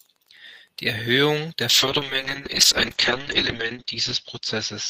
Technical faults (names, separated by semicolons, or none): call bitrate drop